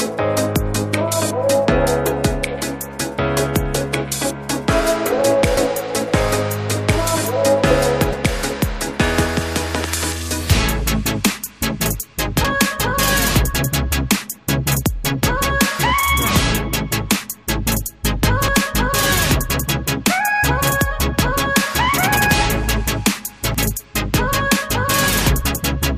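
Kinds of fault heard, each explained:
Dropped buffer (overrun): five points where the sound jumps straight ahead with no silence, at 5.57, 8.13, 12.45, 18.48 and 23.55 s. The skips are brief, though bigger at 8.13 and 12.45 s. It's likely the hardware overwrote samples before the program read them.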